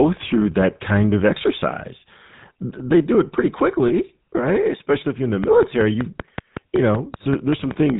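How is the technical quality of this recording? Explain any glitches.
The speech passes through a low-bitrate phone codec for the whole clip, with two further glitches: a brief dropout near 3.9 s and ticking near the end.

GSM full-rate codec, throughout: Voices sound plainly buzzy and gravelly, with nothing above 4 kHz. This fits 13 kbps GSM full rate, whose coarse, sparsely sampled pulse excitation rebuilds the voice roughly.

Lost GSM frames, 3.88 to 3.91 s: There is a short metallic ring where the sound holds. The decoder repeats the last good frame, and the gap suggests one 20 ms frame was lost.

Train of clicks, 5.44 to 7.91 s: Evenly spaced ticks, about 5.3 per second and around fifteen in all, sit over the speech and pauses, peaking about 15 dB above it. They likely come from electrical interference or a faulty connection.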